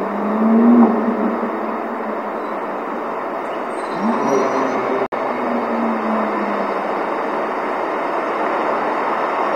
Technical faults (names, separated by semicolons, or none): gap between stream segments